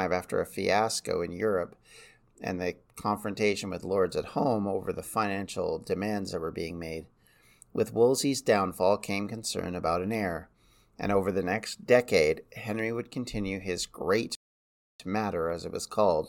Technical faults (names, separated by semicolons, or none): rebuffering stall